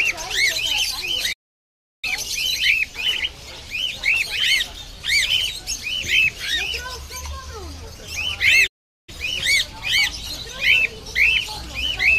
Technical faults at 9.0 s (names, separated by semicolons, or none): playback stall